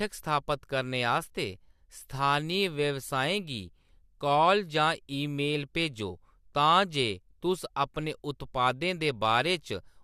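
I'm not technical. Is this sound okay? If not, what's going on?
Yes, this one's fine: nothing in the recording sounds broken or glitchy, so there's nothing here to worry about.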